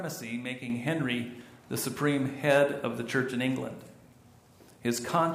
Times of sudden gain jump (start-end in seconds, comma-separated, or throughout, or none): 0.70-5.34